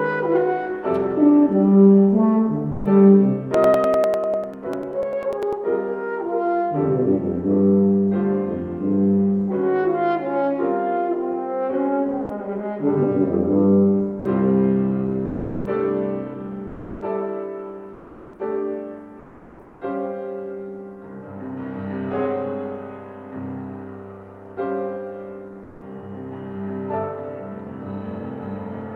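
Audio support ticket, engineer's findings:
Sound dropped by the voice detector at 2.71–2.85, 12.25–12.29, 14.19–14.25, 15.25–15.65 and 16.67–17.01 s. Sound cuts to filler for 40–400 ms, likely the sender's DTX gating it out as background.

Periodic USB or driver dropouts from 3.54 to 5.53 s. Regular ticks every 0.099 s, about twenty of them, each roughly a millisecond of sound skipped. Points to a host-side task stalling the bus.

Comfort noise in place of the background at 17.93–18.39, 19.19–19.81 and 25.63–25.81 s. Real background swapped for smoother synthetic noise, about 2–4 dB quieter, likely from DTX on the send side.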